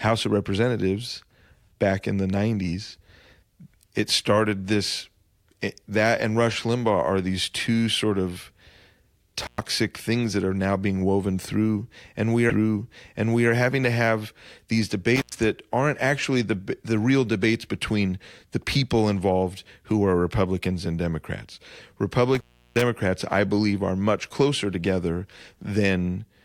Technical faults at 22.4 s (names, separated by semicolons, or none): intermittent contact